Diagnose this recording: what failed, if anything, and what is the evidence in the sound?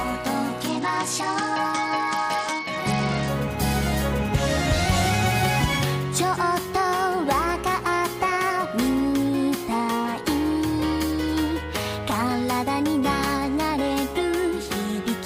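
The failure is a Bluetooth SBC bit pool drop at the codec stage on the wireless link. From 0.68 s to 3.28 s the treble dulls and a gritty noise rises over the sound, then clears as the rate recovers. The sender cut the SBC bit pool under congestion, which fits a fall from 28 to 10, roughly 84 kbps. With so few bits, the top sub-bands go unfilled and the remaining bands are quantised coarsely.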